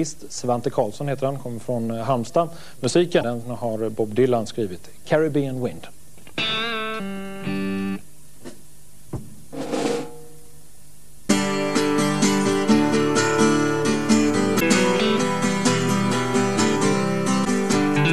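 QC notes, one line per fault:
Throughout, DC offset: the entire waveform sits displaced from the zero line by a fixed amount. It is inaudible as such, but it eats into available headroom and appears as constant energy at the extreme low end of the spectrum, near 0 Hz.
3.20–3.23 s, 9.13–9.19 s, 11.25–11.30 s, 14.57–14.62 s, 17.41–17.47 s, damaged data in a compressed stream: brief blips of about 30 to 60 ms each. Corrupted bytes make the decoder misread frames and lose sync while it hunts for the next valid header, producing a short chirp, squawk, click or hole.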